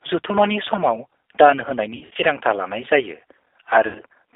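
A speech recording carried over a narrowband VoIP line, with G.729 codec damage that is plainly audible throughout. The band runs from about 300 Hz to 3.6 kHz, so nothing bright survives. The roughness and synthetic edge point to an 8 kbit/s G.729A coder. It rebuilds the voice from a vocal tract filter, a pitch predictor and a few pulses per frame. From 1.95 to 2.23 s there is VoIP packet loss concealed by the speech codec. The decoder guesses each missing stretch from its last pitch and filter, then fades it. About 160 ms is lost in bursts spread over 240 ms, the longest about 60 ms. The sound stretches and fades, and the voice stays weak for a moment after the packets return, on "लानाय जायो". A second loss of about 80 ms from 3.87 to 4.02 s smears the sound the same way.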